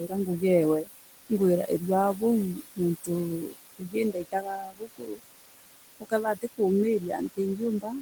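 Speech with room noise sitting about 11 dB below it. Noise suppressor artifacts run throughout. The suppressor pulls the noise down by about 20 dB, frame by frame. So the background dips between phrases and swells back under them. Speech cut by the noise suppressor appears five times. The suppressor mistakes parts of the speech for noise and turns them down with it. The first cut is from 0.0 to 0.43 s, dropping by up to about 16 dB for around 200 ms. The second is from 2.55 to 3.09 s, up to about 19 dB, for about 150 ms. The third and longest is from 3.42 to 5.21 s, up to about 22 dB, for roughly a second. The fourth is from 6.0 to 6.6 s, up to about 19 dB, for about 200 ms. The last runs from 6.99 s to the end, up to about 21 dB. In these spans, soft sounds and word endings come out swallowed or faint.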